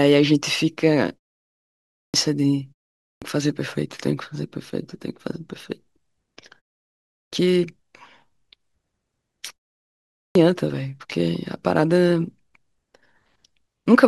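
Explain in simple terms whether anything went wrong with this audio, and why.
Four times, speech comes back after a short pause with its beginning missing, so the next word starts abruptly, as if chopped: at 1.92, 2.99, 7.07 and 10.12 seconds, each losing roughly a quarter of a second. This is a clipped start after a pause. During each gap the playback device goes to sleep, and it needs a moment to wake up again, so the first sounds after the silence are swallowed.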